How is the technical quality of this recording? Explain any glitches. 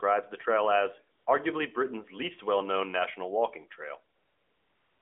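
The technical quality is affected by AMR comfort noise in two places, heard over a narrowband phone line with light codec coloring that fits AMR-NB at 12.2 kbps. From 1.18 to 1.26 s, and again from 4.16 s to the end, the handset judged the talker silent and stopped sending speech frames for 80 ms and then about 0.87 s. The receiver filled each gap with synthetic noise, so the real background gives way to a smooth, steady hiss that switches in abruptly.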